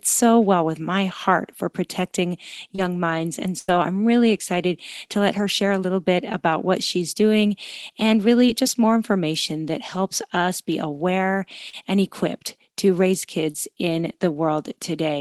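Speech over a call link with lost packets. Short concealed packet loss occurs at 2.75–2.79 s after "my heart for protecting", 6.32 s between "share a little bit" and "what she's", 7.47–7.49 s after "what she's", and at 8.47 s, 11.70–11.74 s and 13.51–13.55 s. In each case 10 to 30 ms of audio never arrived, and the decoder extended the preceding sound to cover it, leaving a brief smear or wobble. A burst of packet loss at 3.59–3.69 s removed about 90 ms in a row. The concealment stretched the last sound into a fading buzz or hiss, and the speech resumes with that stretch missing. The call codec's audio stops near 12 kHz, which points to Opus at a modest bitrate.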